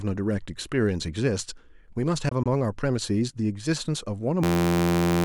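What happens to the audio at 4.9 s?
That's a system hang loop, running from 4.44 s right to the end at 5.24 s. The machine or its driver froze while the sound hardware kept replaying the same tiny slice of its ring buffer. Each pass lasts about 11.6 ms, which fits a 512-sample buffer, so the repeats land at roughly 86 Hz and fuse into a steady, flat buzz instead of a stutter. About 0.7 s of real speech is gone under it.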